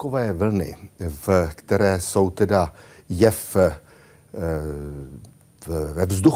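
A short recording of speech with no technical faults. No dropouts, distortion or other playback problems can be heard at any point.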